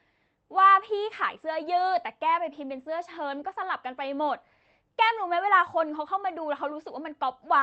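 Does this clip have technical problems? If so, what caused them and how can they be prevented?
No, the speech comes over a WebRTC call path working as designed, its Opus coding carrying the audio band up to 8 kHz, and nothing in the signal points to a technical problem.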